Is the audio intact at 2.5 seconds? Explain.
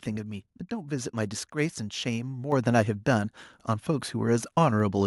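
No, at 2.52 s the microphone volume steps up by about 6 dB in one jump, so the speech and background get louder together as the input level is raised.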